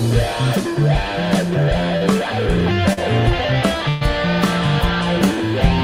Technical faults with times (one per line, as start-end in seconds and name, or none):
1.97-2.03 short concealed packet loss
2.93-2.99 short concealed packet loss
3.89-4.03 burst of packet loss